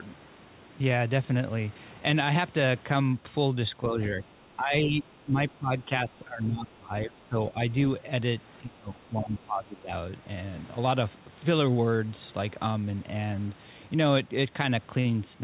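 From 3.88 to 4.27 s the speech dips by about 5 dB, then again from 4.56 to 5.07 s by about 10 dB and from 5.23 to 5.38 s by about 15 dB. This is speech suppressed in double talk. The likely cause is that the far end was talking at the same time, and the echo canceller treated the near talker as echo and attenuated it. The suppression deepens with each event, so the voice thins and partly drops away.

From 5.5 to 5.55 s a brief scrap of the other side's voice leaks through, about 35 dB below the speech. It is a short, faint fragment of far-end audio that likely escaped the echo canceller while it was struggling with the overlap.

The heaviest suppression follows. From 5.57 to 7.6 s and from 8.6 to 9.92 s the speech drops by as much as about 20 dB, with roughly a second and a half affected in each stretch, so the speech breaks up and fades in pieces. Throughout the clip the audio band ends at 4 kHz, which fits a narrowband G.711 call path.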